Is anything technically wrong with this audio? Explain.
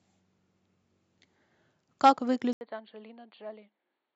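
Yes. From 2.53 s to the end, the speech changes character abruptly, and the likely cause is the input switched to a poorer device, such as another microphone or a headset's call profile. A brief gap of about 80 ms marks the switch. After it, nothing is heard above 4.5 kHz, so the voice turns dull and boxy. The level falls by roughly 10 dB, and a faint new background noise appears well below the speech. A simple filter or codec bandwidth drop would narrow the sound without the gap, the level shift and the changed noise floor arriving together.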